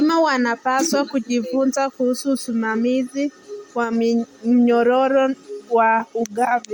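A speech recording carrying a breathy, grainy edge throughout, with noise-like texture where the upper detail should be, even though the band reaches up to about 20.2 kHz; this is plainly audible codec damage, most likely Bluetooth LC3 compression, consistent with roughly 48 kbps in 10 ms frames. Between 3.84 and 3.93 s, the voice and background noise drop together by about 4 dB in an instant, a sudden gain jump, likely caused by a digital gain change applied with no smoothing ramp.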